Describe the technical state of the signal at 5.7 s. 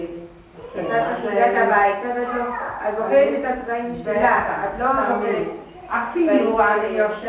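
At 5.7 s the audio is intact, with nothing at that moment beyond the steady band limit of the call path, which leaves no content above 4 kHz, consistent with G.711 A-law coding at 64 kbps.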